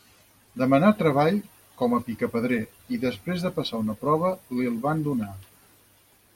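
Nothing in the speech stood out as a technical fault on listening.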